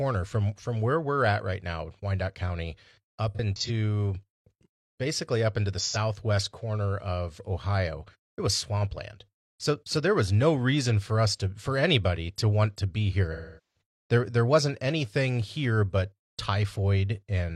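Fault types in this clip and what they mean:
AAC frame loss with concealment: frames were lost and the decoder guessed them from earlier spectrum, leaving three concealed patches in the speech, the longest fading toward a faint noise floor.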